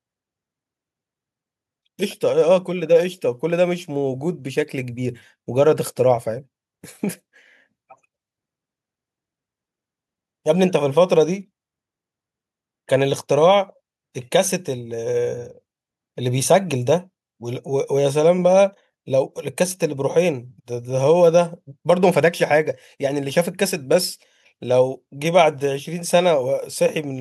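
No technical faults can be heard anywhere in this speech recording. Nothing in it breaks, drops out or distorts at any point.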